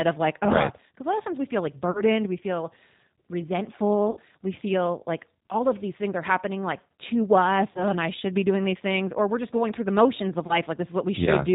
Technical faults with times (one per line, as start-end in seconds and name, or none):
0.00-11.54 G.729 codec
1.91-2.03 VoIP packet loss concealed by the speech codec
4.11-4.17 VoIP packet loss concealed by the speech codec
7.71-7.86 VoIP packet loss concealed by the speech codec
10.47-10.59 VoIP packet loss concealed by the speech codec